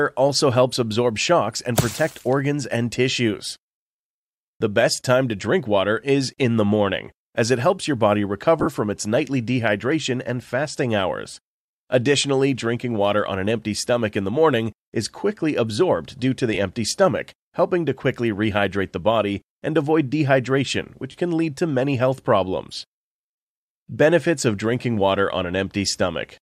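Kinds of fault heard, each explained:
Lost LE Audio frames: the LC3 decoder concealed missing Bluetooth LE Audio frames by repeating the last spectrum with randomised signs, heard as brief noisy smears at 8.6 s (45 ms scattered over 60 ms), 16.54 s (15 ms) and 21.11 s (30 ms).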